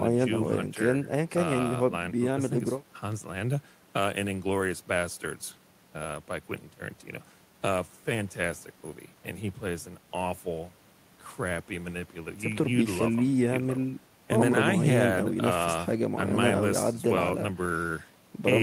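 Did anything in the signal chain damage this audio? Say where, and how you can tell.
No, nothing in the signal chain has left an audible mark on this speech recording. I can't point to any stage, from the wiring through to playback, where the sound has been harmed.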